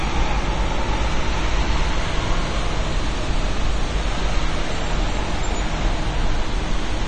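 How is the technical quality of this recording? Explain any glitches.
The quality is noticeably compromised throughout by a dull, smeared sound with nothing above 9 kHz and a warbling, fizzy texture on sustained sounds. This is likely AAC compression, AAC-LC at a rate that fits about 32 kbps. It removes high frequencies and coarsely quantises the remaining spectrum, leaving holes and blur.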